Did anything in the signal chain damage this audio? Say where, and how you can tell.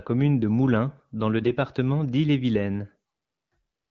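Yes. The damage is AMR bit errors on the radio link, between 1.38 and 1.51 s. Over a weak connection, bits in the less protected part of the AMR-WB frames flipped while the checksum on the critical bits still passed, so the decoder used the frames anyway. Its excitation pulses landed in the wrong places and the pitch, gain and spectral values drifted. The speech keeps its rough pitch and level but turns hoarse, scratchy and gargly. The length of the burst points to about six 20 ms frames hit, at a bit error rate of around 5 percent, and the surrounding 12.65 kbit/s wideband coding stays clear.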